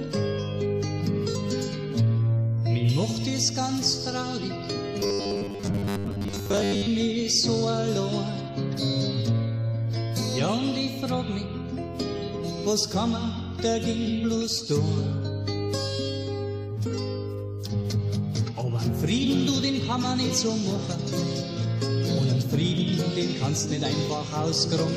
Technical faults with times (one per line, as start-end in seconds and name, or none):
4.99-6.86 robotic sound from repeated short buffers